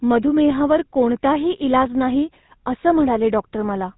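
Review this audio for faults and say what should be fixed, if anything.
Throughout the clip, the speech carries the buzzy, gravelly roughness of the GSM full-rate codec, and the damage is plainly audible. The codec rebuilds the voice from a vocal-tract model driven by a coarse, regularly spaced pulse excitation, which produces the grit. Nothing survives above 4 kHz. The sound fits a 13 kbps GSM stream. A simple band-limit would sound muffled but clean. This sounds rough and buzzy. To prevent it, carry the call over a wideband codec rather than GSM full rate.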